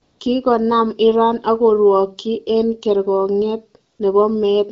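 From 0.03 to 0.19 s, and again from 3.91 to 3.99 s just after "ak korwokyi eng kerkong'iet", AMR comfort noise replaces the real background for 160 ms and 80 ms. Speech frames stopped, so the receiver synthesized a smooth, steady hiss rather than true silence, which sets it apart from a hard dropout or noise gate.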